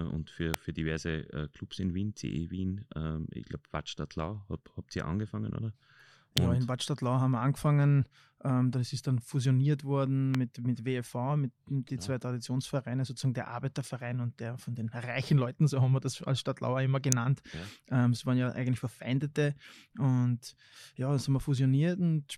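At 0.54 s, just after "und für", a sharp snap sits on top of the speech. It is an electrical switching spike. A nearby switch or motor likely arced, and the audio line picked it up. Further snaps follow at 6.37 s, just before "ja in", and at 10.35 s, between "ist dann fusioniert worden" and "mit mit". A last one lands at 17.12 s. Each is a brief click peaking around −10 dBFS.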